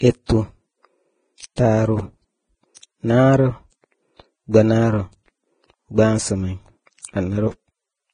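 Throughout the speech, the treble is grainy and hissy, and nothing is present above 9.7 kHz. The tones are roughened and the consonant onsets are blurred. This is heavy damage, likely from Vorbis compression at a very low rate, which fits a bitrate near 20 kbps. Here the codec quantised the upper residue so coarsely that fine detail became noise of similar energy. That gives a broadband fizz, not the warbling, metallic swirl typical of MP3 artefacts.

From 1.56 to 1.58 s, and again from 7.01 to 7.05 s, a short smear of hiss comes just before a sharp onset. It lasts about 20 ms the first time and about 33 ms the second. This is pre-echo. The attack fell late in a transform block, so noise sized for the loud moment spread backwards into the quiet just ahead of it, and the attack itself sounds softened. Unlike reverb or an echo, the noise comes before the sound rather than after it.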